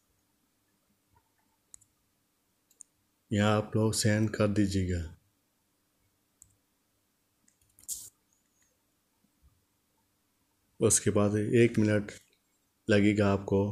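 No technical faults are audible.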